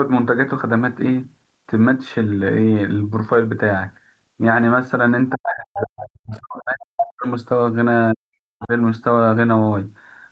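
Speech, heard through a call path whose spectrum stops at 8 kHz, with speech suppressed in double talk from 5.33 to 7.26 s and again from 8.13 to 8.72 s. The voice sinks by as much as about 40 dB in broken pieces, about two seconds in total and then about half a second. The waveform envelope collapses in chunks, and the spectrogram shows the speech energy going dark, likely because the echo canceller turned down both sides while both talked. Inside the first stretch, at 5.74 to 5.79 s, a brief scrap of the other side's voice leaks through, roughly 10 dB below the speech. It shows as a short smudge of foreign energy in the spectrogram, likely residual loudspeaker echo the canceller missed.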